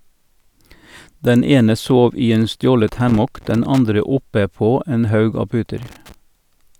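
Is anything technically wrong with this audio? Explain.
Yes. There's loose connector crackle in this speech clip, in two bursts: from 2.88 to 3.79 s, and again from 5.78 to 6.14 s. A worn or dirty contact somewhere in the chain is shifting, so the circuit keeps making and breaking. That chops the signal into fragments, and any DC sitting on the line jumps with each break, throwing in pops. You hear it as an uneven, scratchy crackle over the audio during those stretches.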